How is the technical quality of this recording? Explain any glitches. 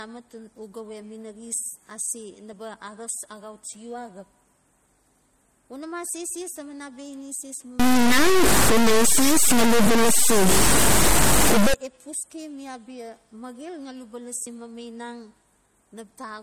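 The technical quality is poor. The speech carries plainly audible compression damage all the way through, plus a stretch of distortion.

Throughout, the sound is watery and swirly, with smeared consonant attacks. This is plainly audible MP3 compression. It points to a low bitrate, around 48 kbps. Short of bits, the encoder zeroes weak frequency lines, which flicker on and off between frames. Nothing is heard above about 20.8 kHz.

From 7.79 to 11.74 s, a distortion rides on the speech, and pauses fill with noise. The likely cause is a stuck bit. One data bit holds a fixed value, so about half the samples are wrong. Small values near silence turn into noise.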